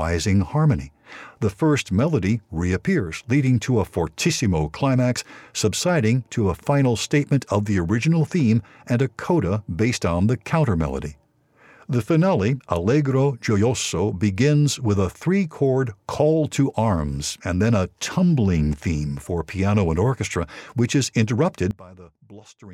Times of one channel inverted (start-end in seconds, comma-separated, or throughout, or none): 21.71-22.73